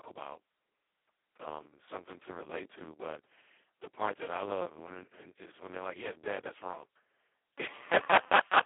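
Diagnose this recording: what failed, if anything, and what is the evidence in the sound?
Codec stage: heavy Speex codec damage throughout. Speech sounds hoarse and robotic, confined to roughly 250 Hz to 3.4 kHz, nothing above 3.8 kHz. This fits a starved excitation at about 2 kbps.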